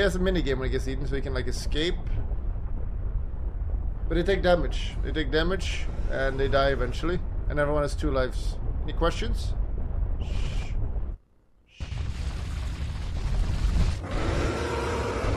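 No dropouts, clicks, distortion, level jumps or other transport faults turn up anywhere in the recording.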